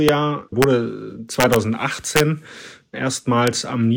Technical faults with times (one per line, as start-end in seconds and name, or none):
0.09 integer overflow
0.62 integer overflow
1.40-1.56 integer overflow
2.16-2.20 integer overflow
3.47 integer overflow